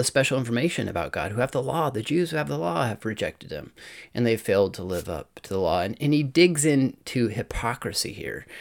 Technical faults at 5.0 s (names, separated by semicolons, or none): wireless microphone noise hit